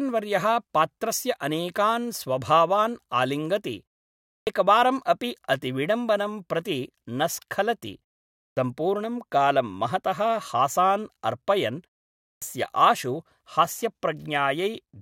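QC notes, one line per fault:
4.37–4.47 s, 8.48–8.57 s, 12.32–12.42 s, clipped start after a pause: after roughly half-second gaps the output device sleeps and needs time to wake, so about 90–100 ms of sound is lost. Speech therefore starts abruptly, missing its onset, just before "एकवारम् अपि अतिविडम्बनं प्रति" and just after "अतिविडम्बनं प्रति न स्खलति".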